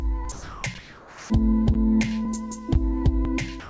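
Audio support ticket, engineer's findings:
Sound dropped by the voice detector at 0.32–0.64 s and 3.60–3.69 s (end of clip). Likely sender VAD misjudged the sound as background and stopped sending; receiver filled the gap with comfort noise. Waveform shows a flat, steady band; spectrogram shows smooth, featureless noise.

Comfort noise in place of the background at 0.78–1.30 s. During the likely DTX pause the real background, about 22 dB below the loud parts, is replaced by smoother synthetic noise about 3 dB quieter. Waveform shows a slight envelope dip; spectrogram shows an evenly textured noise floor.

Call path: nothing above 8 kHz, consistent with a wideband call codec such as G.722.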